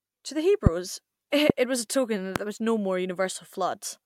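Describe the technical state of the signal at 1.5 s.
A sudden voltage pulse, likely from a plug, switch, static discharge or driver glitch, enters the chain from 1.50 to 1.52 s and is shaped by the following circuitry. It produces a single loud pop, about 20 dB above the speech, which continues underneath, just before "was a token that".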